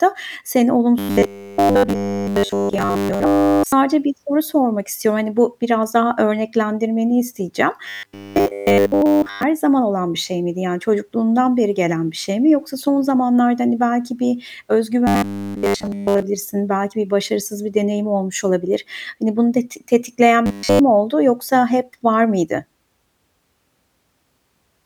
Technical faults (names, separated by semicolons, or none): robotic sound from repeated short buffers